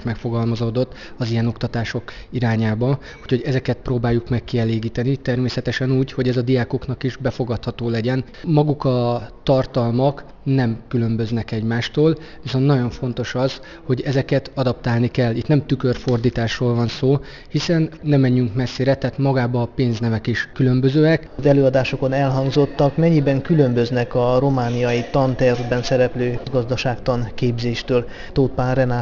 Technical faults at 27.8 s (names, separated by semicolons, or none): aliasing